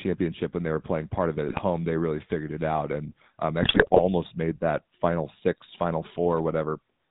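Throughout, the speech has a buzzy, gravelly roughness with nothing above 4 kHz, the sound of the GSM full-rate codec at 13 kbps coding the voice through a crude pulse-driven vocal-tract model. From 1.48 to 1.59 s and again, longer and harsher, from 3.62 to 4.00 s, the voice breaks into squawks, pops and gargling: GSM bit errors corrupting the decoder's filter, pitch and gain values.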